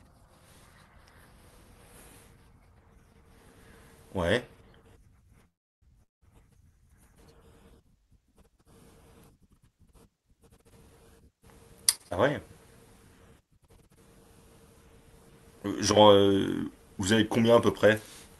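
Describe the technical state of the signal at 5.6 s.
At 5.6 s the speech is inside a call audio freeze spanning 5.47 to 5.90 s, likely from stalled packets emptying the jitter buffer. The last sound trails off into about 340 ms of silence, then speech resumes where it stopped, about 345 ms late, with nothing lost.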